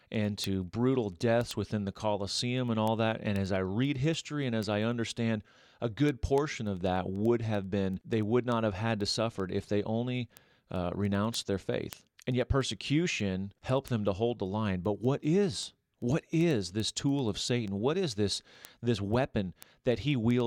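From 0.15 s right through to 20.40 s the speech carries word clock ticks: a steady run of sharp clicks, roughly ten a second, a couple of hundred in all, some louder than others. The receiving device is running on its own clock rather than locking to the digital source, and the two drift apart by something like 200 ppm. Each time they slip past one another, a single sample gets dropped or repeated, and that's the tick.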